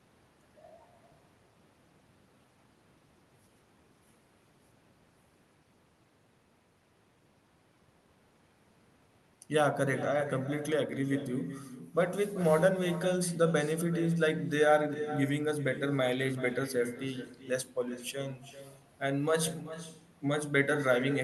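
Speech, carried over a call path with its top end stopping around 12 kHz, and there's echo with no canceller all the way through. The far end's loudspeaker is leaking into its mic, so every phrase returns about 12 dB quieter, roughly 0.4 s later, and thinner.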